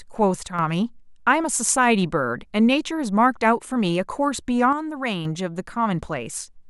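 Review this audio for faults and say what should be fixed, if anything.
One channel drops out at 0.47 to 0.59 s and again at 4.73 to 5.25 s: the speech level falls abruptly by about 6 dB, then recovers. That fits one stereo channel likely going silent, so the mono sum carries only half the shared signal. Prevent it by securing and monitoring both channel paths, such as cables, connectors and interface inputs, during capture.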